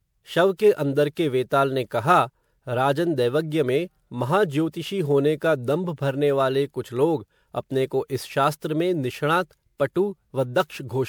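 Generation loss runs through the whole of this speech clip, from start to finish. The sound has a swirly, hollow quality, with smeared consonant onsets and a watery shimmer worse than a single pass at a bitrate that sounds like 128 kbit/s MP3 would leave. The likely cause is repeated decoding and re-encoding, about seven generations, each pass requantising on a shifted frame grid so noise and spectral holes pile up. The spectrum stops near 20.7 kHz.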